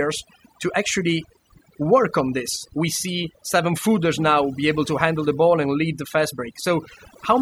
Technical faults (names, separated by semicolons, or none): overdone noise removal